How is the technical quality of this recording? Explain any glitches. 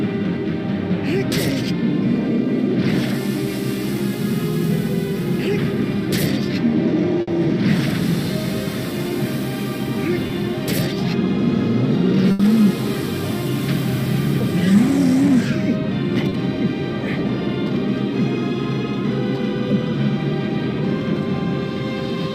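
The recording has four brief dropouts from lost network packets: two longer bursts and two short concealed gaps.

Burst of packet loss, at 7.21 to 7.29 s and 12.31 to 12.41 s: a run of packets never arrived in time. The receiver stretched the last sound for 60 ms and then 80 ms, fading it into a held buzz or hiss. Playback then jumps ahead, dropping that much audio.

Short concealed packet loss, at 10.27 to 10.31 s and 16.29 to 16.33 s: about 20 ms went missing each time. The decoder patched the hole by continuing the preceding sound and then crossfading back, leaving a quick smear or wobble where a brief sound may vanish.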